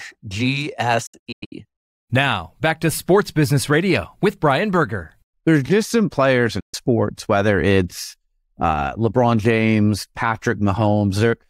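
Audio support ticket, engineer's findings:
Digital broadcast dropout, speech muted in short holes from 1.06 to 1.53 s (about 290 ms lost, longest gap 96 ms), then a single 130 ms hole at 6.60 s. Receiver muting on failed frames, 8 ms fade edges, gaps fit 32 ms frames; content skipped, not stretched, unlike buffer underrun.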